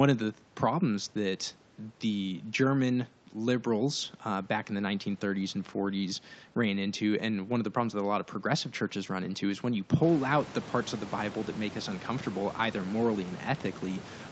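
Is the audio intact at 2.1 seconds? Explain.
Yes, the speech is intact at 2.1 seconds, with no dropout, distortion or other fault at that moment.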